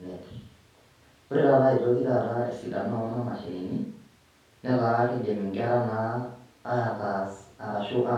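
Nothing goes wrong anywhere in this bit of speech, so there's no technical fault to point to at any moment.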